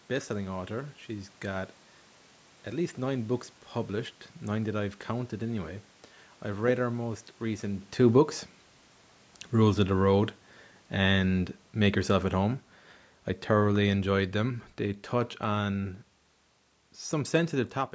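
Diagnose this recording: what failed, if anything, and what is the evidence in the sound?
The automatic gain control in the call processing judged the input too loud or its background noise too strong and lowered its gain gradually, by about 7 dB between 9.54 s and 15.86 s. Speech and room noise sink together, unlike the talker's movement near 7.5 s, where only the voice changes.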